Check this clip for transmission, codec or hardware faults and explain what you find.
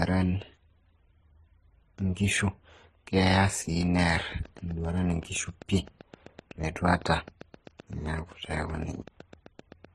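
Two faults are present: a layered codec degradation across the whole clip, and a regular train of clicks over its last six seconds.

Throughout, the speech carries mixed artefacts from more than one codec heard together, with nothing above 15.6 kHz. This likely comes from transcoding between lossy codecs, consistent with a low-rate HE-AAC source re-encoded through MP3 and then Opus. Each stage keeps the earlier damage and adds its own. A spectrogram shows a hard ceiling at 15.6 kHz and blotchy, patchy high-frequency energy.

From 3.83 s to 9.86 s, a train of clicks ticks steadily over the speech and pauses at about 7.8 per second, about fifty clicks in all, peaking roughly as loud as the speech. The probable cause is interference or an interface injecting repeated pulses. The waveform shows evenly spaced spikes of much the same shape, and the spectrogram shows thin vertical lines.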